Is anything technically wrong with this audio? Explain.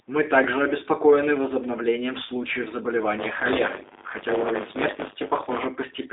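Yes. Two faults are audible in this speech.

The first is G.729 codec damage across the whole clip. The speech has been rebuilt from a vocal-tract filter, a pitch predictor and a few pulses per frame, which fits an 8 kbit/s low-rate voice codec, and the result sounds plainly rough and slightly synthetic. The band runs from about 300 Hz to 3.7 kHz. On a spectrogram, energy stops sharply with nothing above 3.8 kHz, and the harmonics look smeared and grainy.

The second is buffer tearing from 3.18 to 5.67 s. The writer and reader of a ring buffer have drifted until they cross inside every period, so a small slice of each buffer holds audio from about 20 ms earlier, with hard joins on both sides. This produces a robotic 100 Hz buzz that follows the speech, which fits a 10 ms buffer. On the waveform there are discontinuities every 10 ms. On a spectrogram these appear as vertical striations spaced at that rate, present only where speech energy is.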